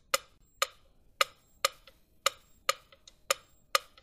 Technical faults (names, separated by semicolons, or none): gap at a join of encoded pieces